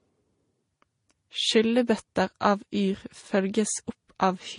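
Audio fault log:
throughout, transcoding between lossy codecs: the speech stops dead at 10.5 kHz and carries two mixed flavours of smeary artefact, likely low-bitrate MP3 re-encoded as Vorbis.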